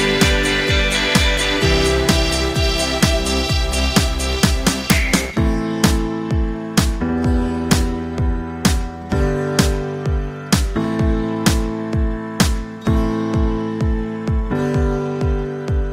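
From 7.14 s to 9.14 s the adaptive stream drops to a lower bitrate for two seconds, most likely because the connection slowed. Quality falls abruptly with no gap: codec artefacts rise, consistent with Opus stepping from roughly 64 to 32 kbit/s.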